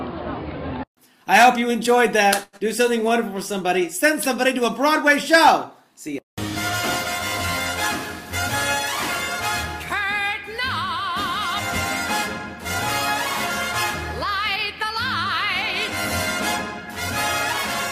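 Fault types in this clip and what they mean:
Short stall from a late packet: a packet arrived late, so the receiver held the sound for about 95 ms around 2.43 s, then carried on with nothing lost.
Skip ahead: right after, near 2.57 s, playback jumps forward, dropping something like 70 ms of audio and joining the two sides almost directly.
Jitter buffer slow-down: from 2.83 to 3.67 s the receiver repeats tiny slices to rebuild its reserve, so the sound runs at about 94% speed, same pitch, slightly drawn out.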